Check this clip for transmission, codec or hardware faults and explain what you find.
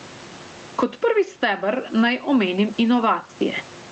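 One fault runs through the whole speech recording: gain pumping.

Gain pumping, throughout: the level swings by around 15 dB. The likely cause is input gain set far too high and a fast limiter or compressor repeatedly clamping it. That clamping makes loud and quiet passages sit unnaturally close in level, giving a squashed, crowded sound. The room noise sits about 34 dB below the speech.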